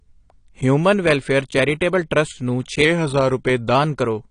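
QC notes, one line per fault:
Throughout: AAC compression. Nothing is left above 10.1 kHz, and the speech sounds dull and smeared with a plainly audible fizzy, warbling texture on sibilants. This likely comes from AAC-LC coding at a low bitrate, which fits roughly 32 kbps, quantising coarsely and lowering the cut-off.
2.85–3.75 s: drift correction step. Just after "ਟਰੱਸਟ ਨੂੰ", playback slows by 6.46% and pitch drops 116 cents, just over a semitone, then snaps back at 3.75 s. This is likely clock-matching software changing the rate in one step to rebalance its buffer.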